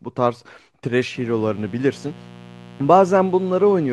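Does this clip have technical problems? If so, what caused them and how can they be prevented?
Yes. From 1.13 s to the end at 3.92 s, mains buzz appears: interference from a dimmer, rectifier or unshielded cable injects sharp spikes twice per 60 Hz cycle, stacking harmonics into the kilohertz range, heard as a raspy buzz roughly 20 dB below the speech. Shielded cabling, balanced connections and keeping the signal path away from dimmers and power supplies would prevent it.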